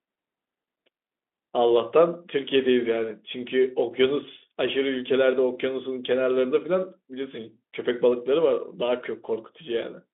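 This is a speech clip with nothing technically wrong with it.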